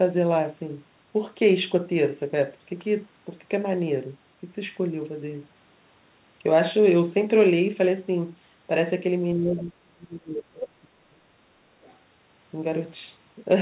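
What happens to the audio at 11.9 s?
From 11.82 to 11.97 s a very faint second voice, roughly 35 dB below the main speech, slips through: the other side's voice leaking through. Its likely cause is far-end playback reaching the microphone that the echo canceller failed to remove, unlike an unrelated talker in the room.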